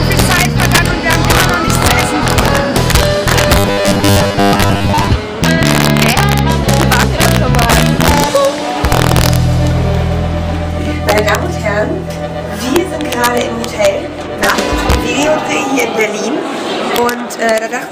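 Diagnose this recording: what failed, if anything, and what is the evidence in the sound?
Integer overflow at the sample-format conversion stage runs through the whole clip. Peaks pushed about 2 dB past the integer limit wrap to the opposite sign, so the loudest moments crack. On the waveform, a small fraction of samples jump from one extreme to the other. On a spectrogram, each jump shows as a thin broadband vertical line.

From 3.59 to 5.09 s the audio turns into a robotic sound from repeated short buffers, a rigid buzz at 100 Hz. That rate fits a 10 ms block being replayed for most of that stretch, likely from the driver or buffer stage being starved. A spectrogram shows evenly spaced harmonic lines at multiples of 100 Hz, and the waveform shows an identical short shape tiled end to end.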